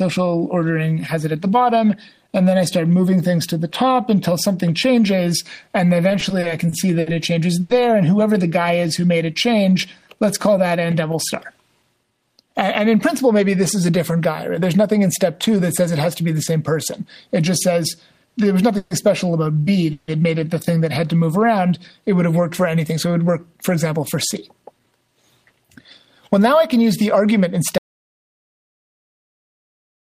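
From 6.09 to 7.08 s the audio has repeated stalls (stutter): the jitter buffer ran dry six times as packets arrived late, and the receiver stretched the last sound to fill about 150 ms, the longest gap 60 ms. It drags and catches. A spectrogram shows short smeared, repeated bands.

At 7.60 to 7.71 s a short stall from a late packet holds one sound for 90 ms while the receiver waits, then resumes where it stopped. The held sound is too long. The waveform shows a repeating periodic stretch, and the spectrogram a flat horizontal smear.

Between 8.48 and 9.18 s a jitter buffer slow-down rebuilds reserve by repeating single pitch periods. This adds 83 ms and plays at 89% speed with pitch unchanged, so sounds are drawn out. The spectrogram shows harmonics stretched sideways, and the waveform shows near-identical cycles in a row.

At 18.78 to 18.93 s and 19.93 to 20.10 s there are two call audio freezes. 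The sound hangs as a fading buzz for 130 ms and then 150 ms before continuing, likely because packets were held up in transit. On the spectrogram each looks like a frozen, decaying column with no silence.

From 22.80 to 25.53 s a jitter buffer speed-up trims short pitch-period slices, removing around a third of a second in total. The audio runs at 109% speed with pitch intact and sounds hurried. The spectrogram shows events packed slightly closer, with tiny seams.

At 27.78 s an audio dropout to silence cuts the sound off abruptly, and it never returns. The waveform goes to a flat line and the spectrogram to solid black, with no room tone at all.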